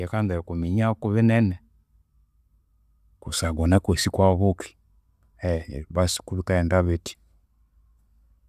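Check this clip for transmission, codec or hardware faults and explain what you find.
Nothing to flag here: listening through the speech, there's no fault to point to at any moment.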